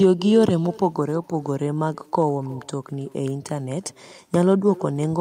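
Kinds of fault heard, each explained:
Echo with no canceller: every stretch of speech is trailed, around a third of a second later, by a faint, thin copy about 21 dB down, running the whole clip. The far end's loudspeaker feeds its microphone and nothing subtracts that return.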